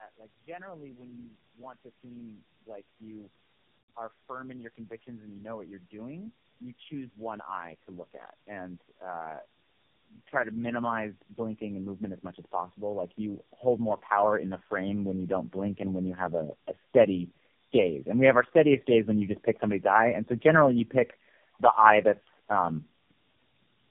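From start to end the speech carries tandem speech coding: the sound points to repeated passes through a low-rate AMR-NB coder, with plain telephone links between, each pass re-coding the previous pass's damaged output. It sounds rough, muffled and warbly, with a grainy noise riding on the voice. On a spectrogram, energy stops at 3.5 kHz, and the harmonic bands look smeared and blotchy. The waveform shows a fuzzy, noisy envelope.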